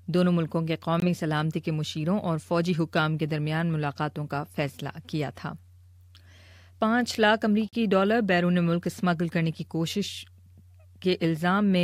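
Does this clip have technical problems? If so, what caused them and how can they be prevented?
Yes. The sound drops to silence twice, for about 21 ms from 1.00 to 1.02 s and for about 42 ms from 7.69 to 7.73 s, then resumes. These gaps are likely Bluetooth stalls: radio interference delays packets, the headphones' small buffer empties, and playback halts until the retransmitted data arrives. To prevent this, keep the phone close to the headphones with a clear line of sight and away from busy 2.4 GHz sources such as Wi-Fi routers.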